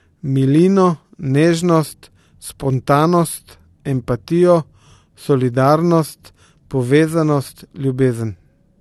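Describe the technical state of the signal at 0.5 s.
At 0.5 s the speech has no content above 12.4 kHz, a hard ceiling that holds for the whole clip, and the band below carries the artefacts of the earlier lossy encode. This is likely low-bitrate audio saved at a high bitrate: the bandwidth limit and artefacts fit a first encode around 48 kbit/s AAC. A later high-rate MP3 pass preserved that damage and could not rebuild the discarded detail.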